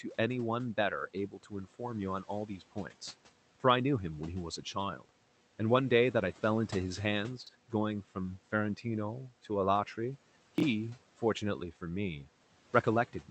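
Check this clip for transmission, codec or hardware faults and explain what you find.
Two kinds of fault turn up in the speech, both processing or transport problems rather than hardware. The room noise sits about 22 dB under the speech, and the Opus call path limits the audio to 8 kHz.

Speech cut by the noise suppressor, at 1.14–1.8 s and 2.47–2.92 s. The suppressor mistook quiet speech for background and ducked it with the noise, by about 11 dB and about 9 dB. Roughly 150 ms and 100 ms of soft sounds and endings come out faint and swallowed.

Chunks out of order, at 7.42–7.49 s and 10.58–10.62 s. A 21.33 ms block plays late, displaced by about two and then one block lengths. Nothing is lost, but each spot sounds briefly jumbled.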